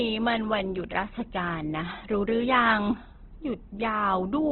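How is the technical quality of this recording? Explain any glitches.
Technical quality is poor for the whole clip. Throughout, likely Opus compression at a low rate consistent with about 12 kbps runs in music mode, refilling starved bands with folded or noise energy. The speech sounds grainy and rough. A spectrogram shows a hard ceiling near 4.3 kHz and speckled, smeared harmonics below it.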